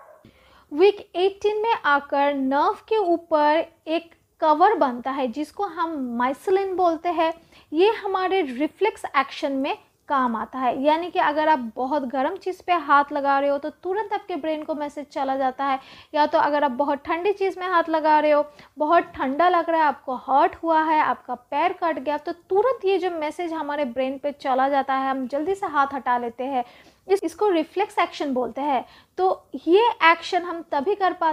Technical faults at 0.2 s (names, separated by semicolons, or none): none